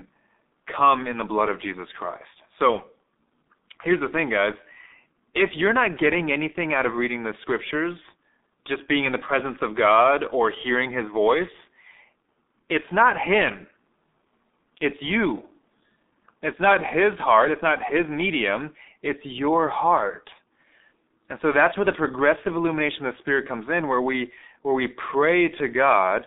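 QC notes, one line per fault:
Throughout: G.723.1 codec. The audio is confined to roughly 250 Hz to 3.7 kHz, so the low body and all the upper brightness are missing and the speech sounds thin and muffled. Heavy coding damage makes the voice hoarse and smears consonants, because the voice model is refreshed only every 30 ms frame and fast articulation is averaged away. The coarseness fits the 6.3 kbit/s mode.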